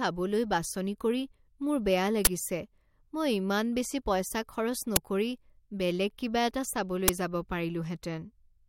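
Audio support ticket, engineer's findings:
Uninitialised buffer, three events in speech. 2.25–2.27 s, just after "বাছনি কৰি মোৰ বেয়া": 20 ms loud crack. 4.96 s: same symptom, 10 ms. 7.08 s, after "বেলেগ কিবা এটা": 10 ms crack. Probable component is the playback buffer, released to output before audio was written, so leftover memory plays as samples. Event lengths fit 10 ms and 20 ms blocks.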